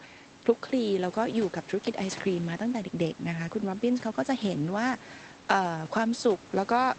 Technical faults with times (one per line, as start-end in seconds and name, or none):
none